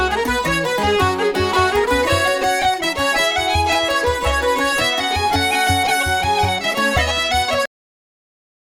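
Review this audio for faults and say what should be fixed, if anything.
Cut-off end at 7.66 s: the sound stops mid-event and falls straight to digital silence for the last second, because the final buffers were never written out.

To prevent it, flush and drain all pending buffers before closing the recording or playback stream.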